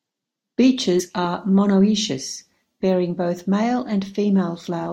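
At about 0.99 to 1.01 s, just before "are monoecious bearing both", the speech lurches forward, as though a sliver of the sentence was snipped out. This is compressed frames skipped: roughly two whole frames of the coded stream, something like 50 ms of audio, were never played because they were missing or rejected by the decoder as damaged.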